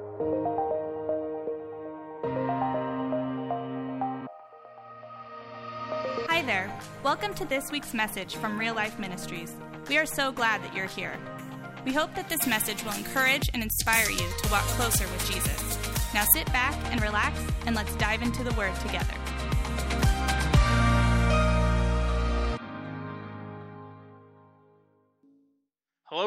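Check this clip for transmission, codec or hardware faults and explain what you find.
Pre-emphasis left on, from 12.22 to 16.33 s. Through this stretch the treble lift an FM 75 µs curve applies before transmission was never undone by the matching de-emphasis at the receiving end, so the high frequencies stay boosted, by about 14 dB at 10 kHz relative to 1 kHz. The sound turns thin, bright and hissy, with sibilant edges pushed forward, then returns to its normal balance once the section ends.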